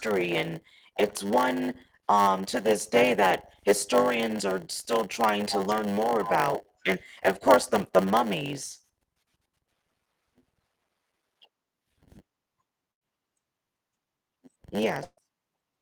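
From the start, a block size mismatch (padded) runs through the speech. One stage writes shorter blocks than the next reads, and zeros fill each remainder. This gives a steady 100 Hz buzz. Speech runs at 0.919 times normal speed, at about normal pitch.

From 12.91 to 13.11 s, a burst of packet loss occurs. The receiver stretches the last sound for 95 ms as it fades, and 60 ms of speech is missing. From 15.04 to 15.20 s, a longer burst fills 132 ms, loses 120 ms, and leaves 30 ms of silence.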